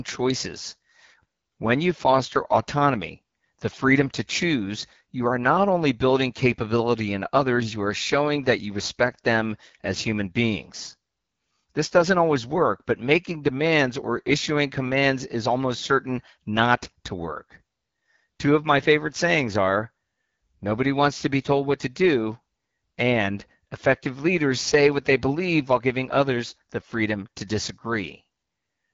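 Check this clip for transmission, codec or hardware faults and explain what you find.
One codec fault runs through the whole clip. It is the AMR wideband (HD Voice) codec. The speech has a rough, raspy edge that is plainly audible. That texture fits the 8.85 kbit/s mode, one of the two lowest rates. The codec models the voice from a few pulses, and at this rate the model is too coarse. Nothing sounds above 7.6 kHz.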